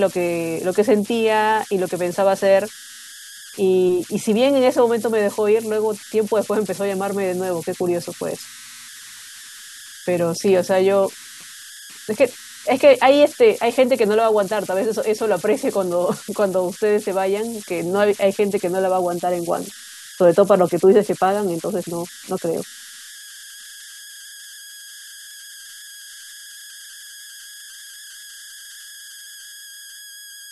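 Throughout the recording, a whistle sits around 1.5 kHz, most noticeable in the pauses between phrases, and a grainy hiss clings beneath the quieter passages of speech, at about 19 dB below the signal. These are converter idle tones: a delta-sigma converter running without dither has locked into repeating bit patterns while its input stayed small, and those patterns surface as a steady tone whose pitch follows the input's offset.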